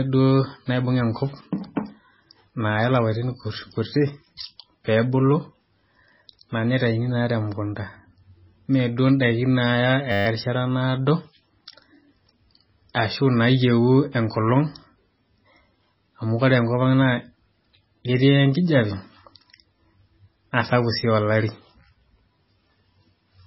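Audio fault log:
Throughout, MP3 compression: the speech is heavily damaged, with nothing above about 5.6 kHz, so it sounds dull and watery, and weak detail swirls in and out from frame to frame. That points to a very low bitrate, likely somewhere around 16 kbps.
10.12 to 10.26 s, system hang loop: a 10 ms slice of audio repeats exactly 14 times, giving a steady 100 Hz buzz. The system froze while the sound hardware kept replaying the same short buffer, so the sound is stuck and buzzing instead of moving on.
12.94 s, pre-echo: a short hiss of about 11 ms leads into a sharp attack, and the attack itself sounds a bit softened. The codec spread its noise across the whole block, so noise meant for the loud part leaks into the quiet moment before it.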